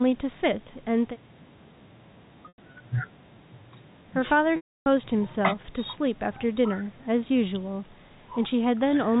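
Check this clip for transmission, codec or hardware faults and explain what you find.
There is one transmission fault, occurring twice, carried over the G.711 telephone coding, which itself leaves only faint quantisation noise.

Packet loss with pitch repetition: from 2.48 to 2.80 s the speech turns briefly buzzy and held, as 140 ms goes missing in scattered gaps, the longest 100 ms. From 4.56 to 4.86 s a 300 ms loss fades to silence. The receiver repeats the last pitch period, fades it out, then cross-fades back.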